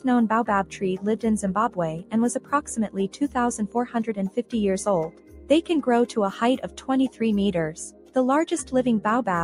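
A noise suppressor applied to music or sounds stays active for the whole clip. It treats sustained, steady material as background noise and keeps pulling it down, so the level swings by around 10 dB as onsets pass through and held portions and tails are pulled back. This gives a pumping, thinning quality. Unlike a gate or a dropout, the sound never falls fully silent, and sharp attacks mostly get through while what follows them sags.

The sound is cut by the noise suppressor more heavily at 1.99 to 2.14 s, 2.88 to 3.36 s, 4.36 to 4.54 s, 5.08 to 5.70 s, 6.64 to 6.89 s and 7.89 to 8.16 s. In each stretch the suppressor judges a steady or decaying passage to be noise and drops it by about 10 to 11 dB. Decays are cut short and sustained parts sink, over spans from a fraction of a second to about half a second. This is distinct from the broader pumping because the level falls sharply and locally in these spots, not just as the ongoing swing.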